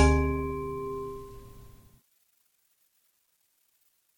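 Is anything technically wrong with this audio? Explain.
No, the signal of this everyday sound recording shows no technical faults that a listener can pick out.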